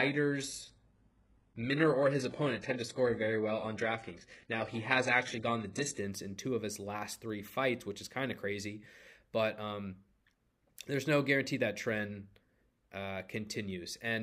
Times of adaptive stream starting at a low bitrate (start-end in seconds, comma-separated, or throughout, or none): 0.00-6.00